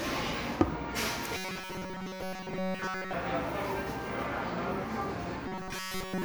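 Audio likely arriving too seldom, with a short block of about 5.3 ms replayed in its place, gives robotic sound from repeated short buffers: a rigid 188 Hz metallic buzz from 1.37 to 3.13 s, replacing most of the audio, and from 5.48 s to the end, replacing all of it.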